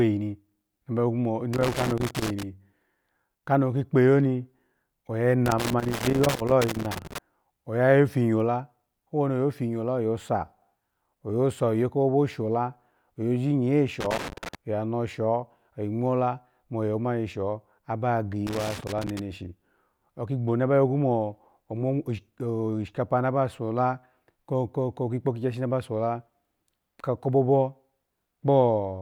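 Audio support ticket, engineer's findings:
Loose connector crackle, speech track: bursts at 1.53–2.43 s, 5.46–7.18 s, 14.01–14.55 s, 18.47–19.19 s. Probable worn or dirty cable contact intermittently breaking, chopping signal, DC pops. Irregular scratchy texture, unlike evenly spaced buffer-underrun clicks.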